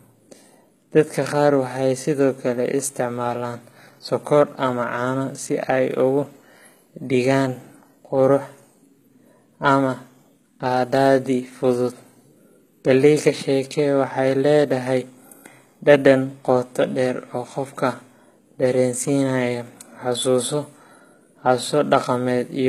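This speech clip has treble that stays bright but sounds synthetic throughout, with s sounds turning gritty and metallic. This is likely HE-AAC compression, with upper bands rebuilt from copied lower ones rather than coded, consistent with a low bitrate around 20 kbps.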